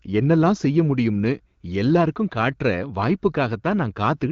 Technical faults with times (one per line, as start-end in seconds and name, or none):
none